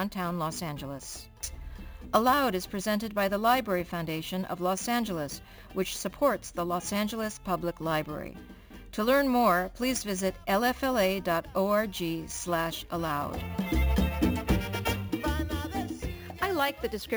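All the way through, there's imaging from sample-and-hold upsampling: a metallic fizz in the 8–16 kHz band, about 19 dB down and tracking the sound, which fits 16 kHz audio stepped up unfiltered.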